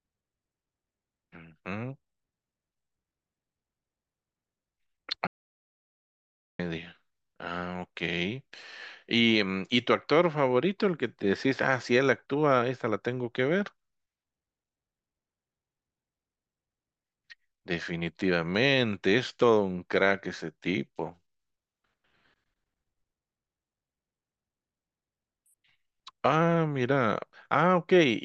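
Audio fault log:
5.27–6.59 s, audio dropout to silence: the speech just stops mid-flow and drops into dead digital silence for about 1.3 s, with no room tone at all, then comes back. That points to the input likely disconnecting or muting briefly while the recorder kept writing silence.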